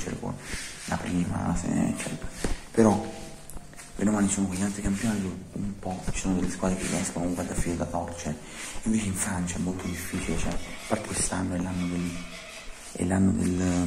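Dropped buffers, likely from overruns, occur at 3.34, 7.52, 9.27 and 11.05 s. At each point a short piece of the audio is simply missing and the sound on either side is butted together, so there is no gap of silence, just a sudden forward jump. The first three lose about 20 ms each. The skip at 11.05 s is longer, around 70 ms.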